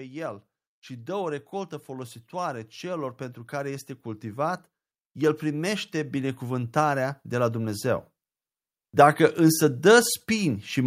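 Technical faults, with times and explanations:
0.05–4.55 s, 5.14–8.03 s and 8.97 s to the end: automatic gain rising. Each time, the automatic gain control judges the input too quiet and turns itself up slowly, by about 8 dB in the first stretch and about 6 dB in the second. Speech and background noise swell together over a second or more. A compressor's pumping is quicker and tied to loud syllables, and a deliberate fade lacks this repeated creeping rise.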